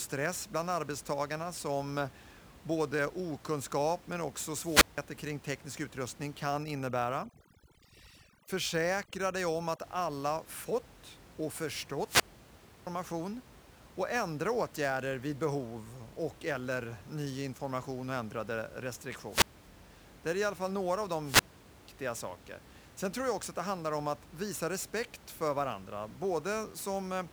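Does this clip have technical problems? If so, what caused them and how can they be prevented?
Yes. Sample clock jitter runs through the whole recording. The converter's clock wanders by a few microseconds, so samples land early or late, and the error grows with steep, loud, bright passages. It produces a hiss roughly 20 dB under the speech that disappears in pauses. On a spectrogram this shows as a faint broadband haze that tracks the speech energy. Use a stable, low-jitter clock source or a better interface.

Wireless microphone squelch dropout occurs at 4.59–5.01 s, 12.04–12.87 s, 19.26–19.64 s and 21.22–21.83 s. Each time, the FM link fades, static swells, and the receiver's squelch mutes the output for 0.17 s, 0.67 s, 0.22 s and 0.44 s. On a waveform each shows as a flat gap with noisy edges. Shorten the antenna distance, keep line of sight, and choose a clear frequency.

Overdone noise removal affects 6.55–9.82 s. 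The noise reducer pulls individual bands to nothing whenever they approach its noise estimate, taking quiet speech detail with them. The background drops away and breaks into twinkling specks. A spectrogram shows scattered isolated dots in black space. The underlying room noise sits about 22 dB below the speech, so apply gentler reduction or none at all.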